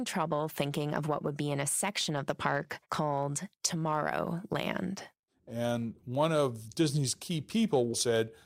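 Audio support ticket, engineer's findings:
Block size mismatch (truncated), full clip duration. Upstream stage writes longer blocks than the next stage reads; tail of each block dropped. Result: 100 Hz buzz across the speech, matching a 10 ms block period. Playback speed unchanged (1.0x).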